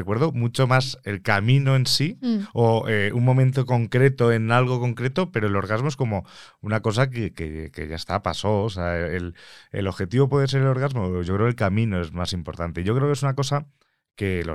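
No technical faults are audible anywhere in the recording.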